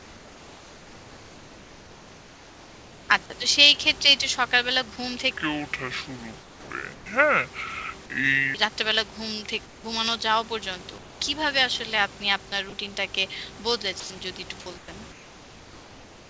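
From 0.00 to 3.09 s the room background gives way to comfort noise in place of the background. It sits about 23 dB below the loud speech and is about 3 dB quieter than the real room. It is steady and featureless. The likely cause is discontinuous transmission. The sender stops when its voice detector hears no speech, and the receiver fills the gap with synthetic noise. The same swap returns from 6.40 to 7.06 s. It happens again from 9.66 to 9.84 s, about 4 dB quieter, and from 10.98 to 11.20 s, about 3 dB quieter.

At 12.70 s there is sound dropped by the voice detector. A brief bit of speech is likely taken for background, and steady noise replaces it. From 14.00 to 14.10 s it happens again, and about 50 ms of speech is lost before the detector triggers. Through the G.722 call path nothing sounds above 8 kHz.

Comfort noise takes over the background once more from 14.78 to 16.28 s. The room's texture is gone, and a smooth, even hiss remains until the clip ends.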